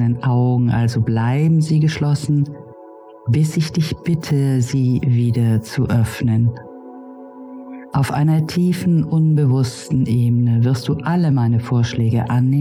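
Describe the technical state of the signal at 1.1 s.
At 1.06 s, compressed frames are skipped: about one 26.1 ms frame, roughly 30 ms of audio, never plays, so the sound jumps forward. Unlike a dropout there is no silent gap; the audio simply jumps ahead at the join.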